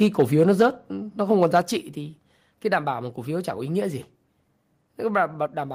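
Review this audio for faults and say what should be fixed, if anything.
Microphone overload, from 0.01 to 0.66 s and from 1.31 to 1.6 s: the loudest speech peaks turn harsh and crackly, with flattened tops. This is likely the input driving the converter past full scale, by about 5 dB in the first stretch and about 2 dB just before "trị thì cái đảm".

Microphone volume stepped down, at 0.62 s and 1.62 s: speech and background drop abruptly, by about 3 dB and then about 4 dB, the second just before "trị thì cái đảm". Each drop follows a distorted stretch, likely the call software cutting the device's input gain in a single step after detecting clipping.

To prevent both, set the microphone input gain lower before recording so that peaks stay several decibels below full scale and the software never needs to step the level down.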